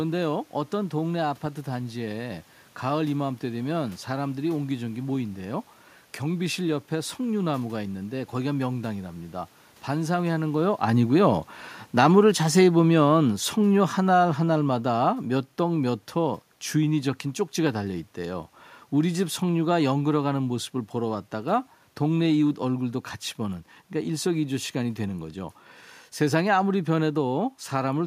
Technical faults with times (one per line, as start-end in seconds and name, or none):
10.02-22.53 automatic gain falling